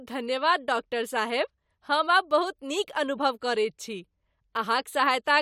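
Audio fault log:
No faults can be heard anywhere in this speech recording. There is nothing to log beyond this single line.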